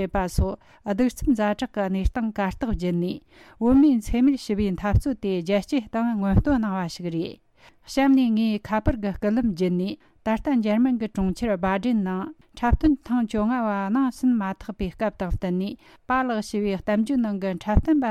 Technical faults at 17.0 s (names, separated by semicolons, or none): none